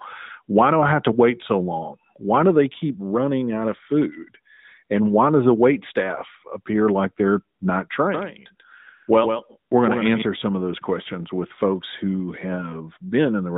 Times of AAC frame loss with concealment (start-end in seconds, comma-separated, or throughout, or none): none